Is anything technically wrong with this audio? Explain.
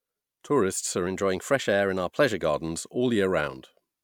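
Yes. From 1.07 to 2.42 s the speech abruptly runs about 6% fast and rises by about a semitone (99.5 cents), then snaps back to normal. This is likely a drift correction step, where clock-matching software briefly raised the playback rate to drain its buffer.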